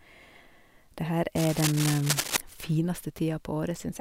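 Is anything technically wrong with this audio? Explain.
Yes. From 1.36 s to 2.37 s, cable scratch noise runs over the speech. A worn cable or connector was likely being moved, so its contact resistance jumped about rapidly. That adds dense, uneven crackling and rustling bursts, only a little quieter than the speech itself.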